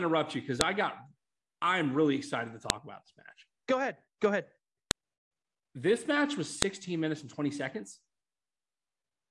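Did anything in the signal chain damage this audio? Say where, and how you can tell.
Yes. Four sharp, loud clicks cut through the speech at 0.61 s, 2.70 s, 4.91 s and 6.62 s, each lasting only a millisecond or two and landing regardless of what the speech is doing at that moment. This is a file header played as audio, a storage-stage fault: separate WAV segments were joined or streamed with their headers intact, so those few dozen header bytes were read as sample values and reproduced as a snap at each segment boundary.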